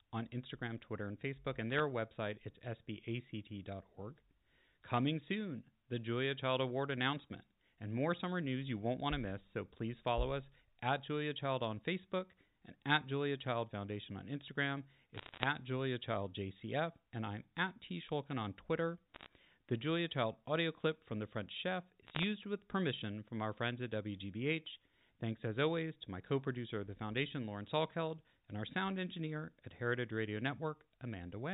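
Bit errors on a digital phone line crackle at 1.70–1.80 s (before "website it's"), 15.14–15.44 s, 19.14–19.26 s and 22.07–22.24 s (before "with permission from our"). Under one percent of bits flip, each corrupting one sample, and hits on high bits make sharp ticks. These appear as lone waveform spikes and thin vertical spectrogram lines.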